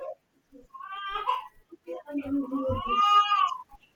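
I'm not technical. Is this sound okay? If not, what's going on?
Yes, this recording sounds okay. Nothing in it points to a technical problem.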